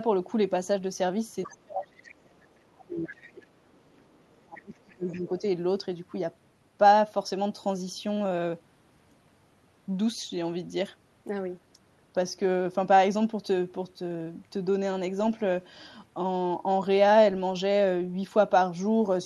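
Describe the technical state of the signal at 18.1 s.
At 18.1 s the speech is intact, with no dropout, glitch or distortion, only the ordinary sound of the call codec carrying it.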